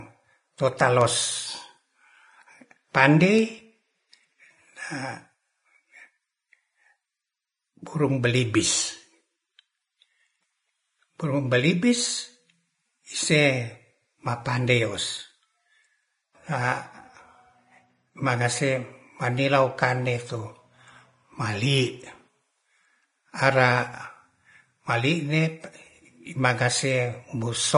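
A speech recording with a hissy, grainy treble, roughened tones and smeared consonant attacks throughout, and nothing above about 10.5 kHz. This is likely Vorbis compression at a low setting, consistent with roughly 28 kbps, where the coarsely quantised upper residue turns fine detail into noise. Two isolated sharp ticks at 1.01 s and 3.39 s are bit error spikes: a flipped bit makes the sample value leap by a power of two and snap back, producing a broadband click unrelated to the speech, here pointing to a burst of a few consecutive samples.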